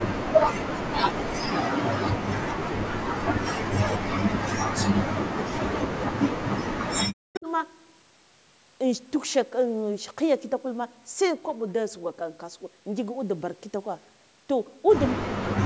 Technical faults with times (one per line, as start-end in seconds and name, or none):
0.16-2.11 speech suppressed in double talk
2.64-7.47 speech suppressed in double talk
7.34-7.40 echo leak
15.15-15.66 speech suppressed in double talk